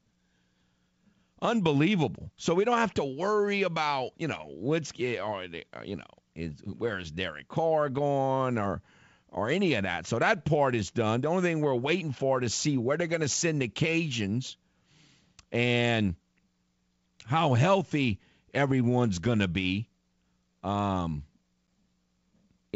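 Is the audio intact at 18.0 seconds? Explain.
Yes, the audio is intact at 18.0 seconds: the speech there carries through the G.722 wideband telephone coding at 64 kbit/s with no fault.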